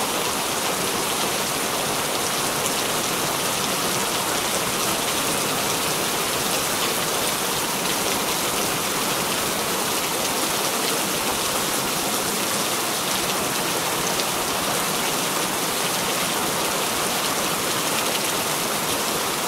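No fault can be heard anywhere in the clip.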